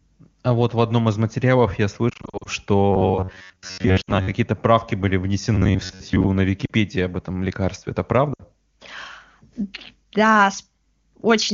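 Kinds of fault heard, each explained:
Lost AMR speech frames: Radio errors corrupted coded speech frames, and the AMR-WB decoder covered each gap by repeating its last good pitch and vocal-tract settings at falling gain. Just after "одном из материалов я", from 2.09 to 2.48 s, about 200 ms is lost in short bursts no longer than 40 ms, so the sound dips and warbles. Shorter dips follow at 4.01 to 4.11 s, 6.65 to 6.71 s and 8.33 to 8.41 s, each 40 to 60 ms long.
Robotic sound from repeated short buffers: New audio is arriving too seldom, and the gaps are filled by looping the most recent short chunk while the real signal is skipped. Both passages carry a fixed buzz at 93.8 Hz, a period of about 10.7 ms, which likely reflects a playback buffer of that length being replayed. From 2.92 to 4.31 s, ending just before "правки были", most of the audio is looped and sounds metallic. From 5.55 to 6.27 s, starting right after "правки были", about half is looped. 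Apart from these faults, the wideband codec itself adds little or no audible damage.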